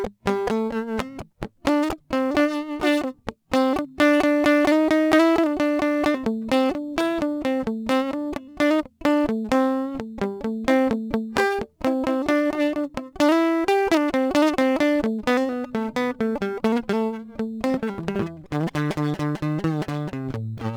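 Throughout the music there's crude rate conversion: samples repeated without filtering, fitting a 44.1 to 48 kHz change, leaving gritty inharmonic fizz on loud, bright passages.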